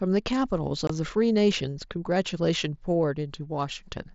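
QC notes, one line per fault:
0.87–0.90 s, unconcealed Bluetooth headset packet loss: a gap of about 22.5 ms where the speech simply drops out and comes back, with hard edges. A short run of headset packets never made it to the phone, and nothing was patched in, so silence or an idle pattern filled the space. The length fits roughly three lost 7.5 ms frames on the mSBC link, whose wideband sound tops out around 8 kHz.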